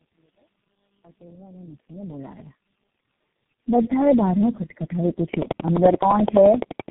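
Across the whole clip the speech sounds rough, muffled and warbly, with nothing above 3.8 kHz. This is tandem speech coding: the degradation fits about four speech codecs in a row, ending in G.723.1.

From 5.34 s to 6.89 s a train of clicks ticks over the sound at a regular 11.7 per second, roughly twenty in all, peaking about 15 dB above the speech. Interference from nearby equipment or a faulty connection is the likely cause.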